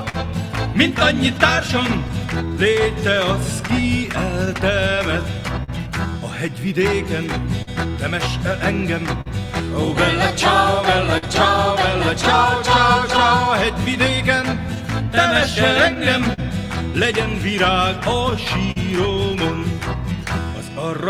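Throughout, there is clock drift between sender and receiver: the sender's clock runs about 3 percent slow, so the jitter buffer keeps draining and the timing wavers unevenly.

From 0.09 to 5.70 s, scattered short gaps appear. About seven packets arrived late or were lost, and continuing the last sound filled roughly 150 ms, with the longest gap around 40 ms. These are heard as brief ticks and smears.

From 2.46 s to 20.89 s, repeated timing corrections stretch playback to 99 percent speed, adding about 100 ms in small repeated pieces.

At 7.62 to 7.69 s, a short stall from a late packet empties the buffer. The last sound is held for 47 ms. The same happens at 9.21 to 9.28 s for 45 ms and at 11.18 to 11.25 s for 50 ms.

From 13.17 to 16.40 s, scattered short gaps return. About seven holes are patched, totalling roughly 100 ms, with the longest near 50 ms. They are heard as brief hiccups.

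At 18.71 to 18.78 s, another late-packet stall holds the sound for 45 ms.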